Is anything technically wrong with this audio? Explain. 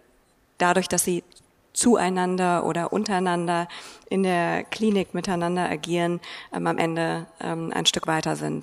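Yes. From 0.22 s to 8.45 s there are clock slip clicks: faint regular ticks roughly every third of a second, around thirty in all. The likely cause is two unsynchronised clocks differing by around 100 ppm, each tick fitting one dropped or repeated sample.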